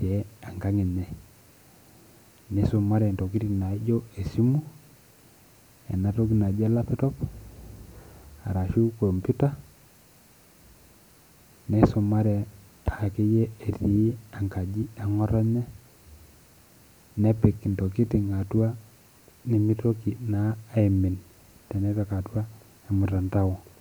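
Nothing in the speech here stands out as a technical fault; there's simply nothing to flag.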